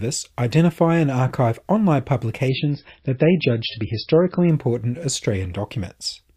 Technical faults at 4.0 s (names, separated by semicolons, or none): adaptive stream at a lower bitrate